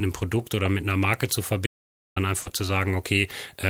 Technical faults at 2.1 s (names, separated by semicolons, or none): audio dropout to silence